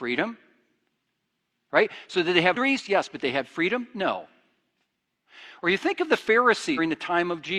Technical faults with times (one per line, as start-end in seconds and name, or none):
2.51-2.56 compressed frames skipped
6.74-6.79 compressed frames skipped